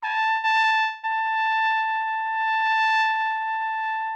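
A burst of packet loss at 0.31 to 0.46 s leaves 120 ms undelivered. The receiver stretches the last sound into a fading buzz or hiss, then jumps ahead past the gap.

Short concealed packet loss follows at 0.59 to 0.75 s and 0.67 to 0.74 s. Each time about 40 ms goes missing, patched by continuing the preceding sound, which heard as a quick smear before blending back in.

From 0.80 to 1.06 s, audio continues as a fading buzz or hiss for about 230 ms before resuming with roughly 240 ms gone, likely a long network dropout.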